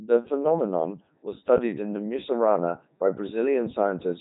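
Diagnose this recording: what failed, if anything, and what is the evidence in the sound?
Codec stage: a Codec 2 vocoder runs through the whole clip, leaving the speech heavily damaged, robotic and buzzy, which points to the 3.2 kbit/s mode. The decoder rebuilds speech from sine waves, so a spectrogram shows neat synthetic harmonics and nothing above 3.8 kHz.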